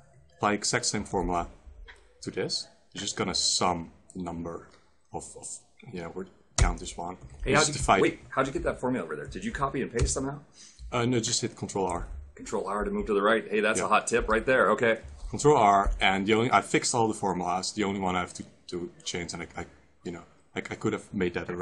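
No technical faults can be heard anywhere in the audio. Nothing interrupts or degrades the sound at any point.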